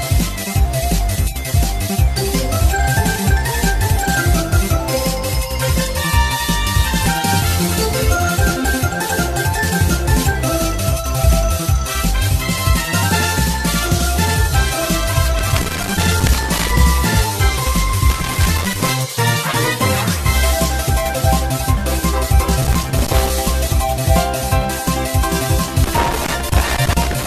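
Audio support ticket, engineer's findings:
Skips at 3.16 s and 7.06 s, each with the sound jumping ahead, roughly 150 ms gone, and a shorter jump of about 50 ms at 26.24 s. No gap of silence, just a hard splice. Likely a dropped buffer (overrun): the capture side didn't pull samples before the hardware overwrote them, so a chunk vanished and the two edges butted together. Worth checking the audio thread's scheduling and buffer headroom.

Irregular bursts of crackle and scratching at 15.39–16.70 s, 18.10–18.90 s, 22.62–23.30 s and 25.84 s through the end at 27 s. Looks like loose connector crackle, a worn or dirty contact making and breaking as something moves. That chops the signal, and any DC on the line adds pops on top. Reseat or swap the cable and jack, clean the contacts, and see if the bursts follow a particular plug.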